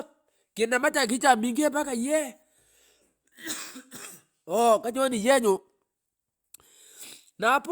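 Nothing technically wrong turns up anywhere in this bit of speech, so there's no fault to point to.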